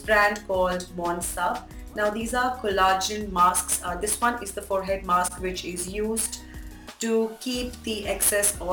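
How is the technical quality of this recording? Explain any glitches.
The recording is marred by sample clock jitter throughout. A timing wobble of around 7 microseconds smears steep waveform slopes into noise roughly 15 dB below the signal, heard as hiss that swells on loud, bright passages and disappears in silence. A spectrogram shows a haze that follows the signal's energy.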